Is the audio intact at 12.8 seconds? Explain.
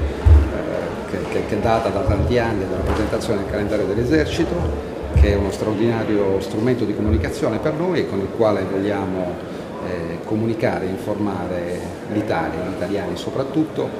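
Yes, the audio is intact at 12.8 seconds, with no dropout, glitch or other fault at that moment.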